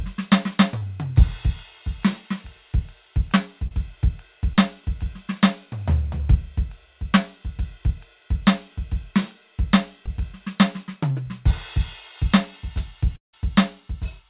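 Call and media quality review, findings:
Short concealed packet loss at 0.78–0.82, 3.67–3.72, 4.55–4.58, 6.18–6.20, 10.06–10.08 and 11.12–11.16 s in the music. Jitter buffer/decoder concealment fills 10–30 ms gaps by extending the prior sound. These show as brief smeared or wobbling patches, visible as short blurred vertical bands on a spectrogram.

Long network dropout at 13.16–13.34 s, likely from a network stall. About 170 ms of audio is missing. A fading buzz gives way to near-silence, which appears as a waveform collapse and an empty spectrogram column before the audio resumes further on.

The call path's band limit sits at 4 kHz, which fits G.711 mu-law at 64 kbps, so the spectrogram shows no content above 4 kHz throughout.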